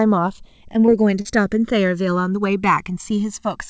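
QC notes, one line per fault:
Throughout: channels drifting apart. The two sides sit on clocks that disagree by a few hundred parts per million, so the gap between them slowly creeps to about a millisecond by the end. Folded to mono, that sliding delay sweeps comb notches around, giving a slow flanging.
0.86–0.90 s and 1.22–1.27 s: short concealed packet loss. About 20 ms and then 40 ms of the call arrived too late, and the receiver papered over them by stretching the preceding sound before fading back in. It comes across as a quick smear or wobble, with the band topping out at 8 kHz as you'd expect from a wideband call codec like G.722.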